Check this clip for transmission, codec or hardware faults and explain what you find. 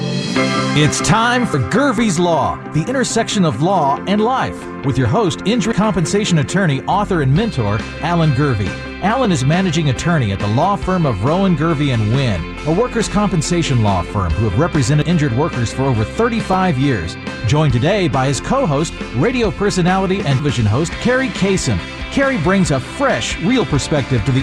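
Two faults are present: dropped buffers and clock drift buffer slips.

Dropped buffer (overrun) at 1.54, 5.72, 15.02 and 20.40 s: a likely overrun discards audio, roughly a tenth of a second, and a third at 20.40 s, so the sound jumps ahead.

Clock drift buffer slips every 3.68 s from 1.98 to 23.62 s, about seven: a clock mismatch near 400 ppm likely drops or repeats about 70 samples each time, giving regular clicks.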